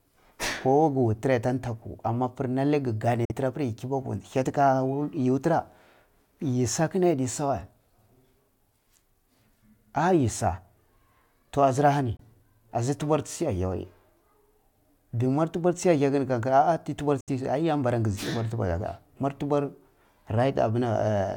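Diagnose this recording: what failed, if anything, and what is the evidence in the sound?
Speech drops to silence at 3.25–3.32 s, 12.17–12.21 s and 17.21–17.29 s, likely a Bluetooth dropout on the wireless playback link. Gaps fit whole lost packets of about 23 ms. Unlike an underrun, sound resumes further on, not delayed.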